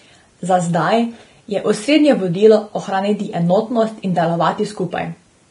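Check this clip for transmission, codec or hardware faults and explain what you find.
One codec fault runs through the whole clip. Likely Vorbis compression, fitting a bitrate near 30 kbps, quantises the treble coarsely and cuts everything above 10.6 kHz, so speech sounds hissy and grainy with blurred attacks.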